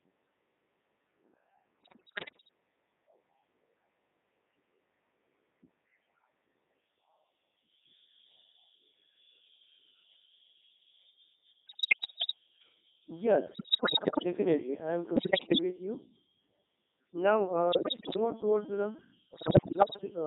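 It's a speech recording, and the whole thing has gone through the Codec 2 vocoder. You hear a robotic, buzzy voice squeezed into roughly 200 Hz to 3.7 kHz, and the heavy smearing fits Codec 2's top 3.2 kbit/s mode. Nothing of the original waveform survives: the decoder only gets pitch, voicing, energy and a rough spectral shape, and rebuilds the voice from sine waves. On top of that come six bursts of bit errors on digital voice radio, at 1.82–2.49 s, 11.66–12.33 s, 13.48–14.24 s (just before "I am"), 15.16–15.60 s (between "I am" and "with you"), 17.72–18.17 s (just before "on towards") and 19.34–20.01 s. In each one the voice lurches in pitch, level and tone colour and breaks into warbly, bleepy gibberish. That's what flipped bits do at this rate, since each bit steers a whole frame's parameters. The error rate sounds like several percent, heading toward a tenth or more in the worst bursts.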